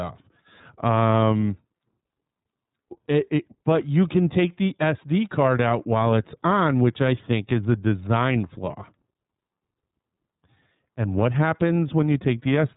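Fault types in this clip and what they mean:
iLBC codec: throughout the clip, the speech is cut off above 3.8 kHz, and coding each frame's excitation independently leaves a plainly audible rough, synthetic edge. The texture fits 30 ms frames and a bitrate of about 13.3 kbps.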